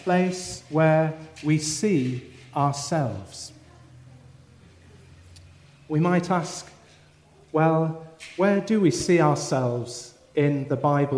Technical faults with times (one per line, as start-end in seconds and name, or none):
none